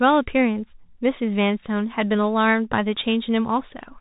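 Bluetooth CVSD headset codec damage runs throughout the speech. A one-bit delta coder tracking the waveform with an adaptive step leaves nothing above 3.8 kHz, consistent with 64 kbps CVSD. Sibilants sound scratchy, loud bright sounds distort where the step lags, and granular hiss persists.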